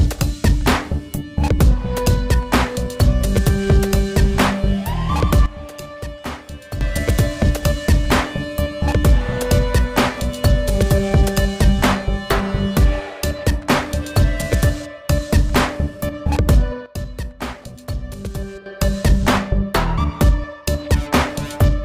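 At 5.46 s the level falls abruptly by about 12 dB and returns at 6.81 s. At 16.86 s it drops again, by about 11 dB, until 18.66 s. Sound and background noise fall together. This sudden gain jump likely comes from gain applied without a ramp.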